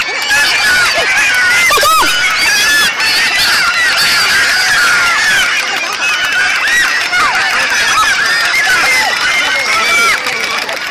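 Wrong sample rate, from start to finish: the samples are being played back faster than they were captured, with no conversion, so everything runs at double speed and sits a full octave (12 semitones) high, which fits 16 kHz audio played out at 32 kHz.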